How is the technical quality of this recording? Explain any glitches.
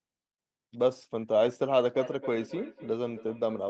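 The recording has one clear glitch: feedback echo between two devices, starting at 1.95 s and running to the end at about 3.69 s. A second device in the room replays the incoming speech, and the microphone picks it up again. The local echo canceller only removes its own device's playback, so this sound returns at a fixed interval of roughly 300 ms, each pass thinner and more ringing, peaking at about 15 dB below the speech. On a spectrogram, faint evenly spaced copies of each syllable trail behind it. The waveform shows small repeating bursts in the gaps, with nothing above 8 kHz, as expected from the call path.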